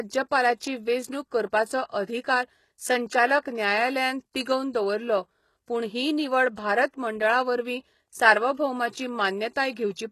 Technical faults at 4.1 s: HE-AAC compression

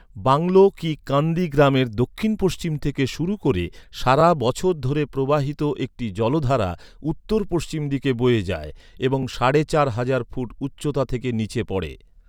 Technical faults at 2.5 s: none

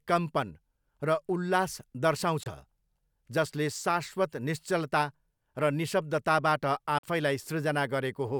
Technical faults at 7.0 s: Bluetooth dropout

